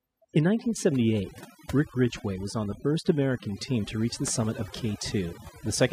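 A speech recording with overdone noise removal throughout. The noise reduction was set too aggressively, so frequency bands near its noise estimate are cut almost entirely, taking quieter parts of the voice with them. The background drops and breaks up into twinkling specks.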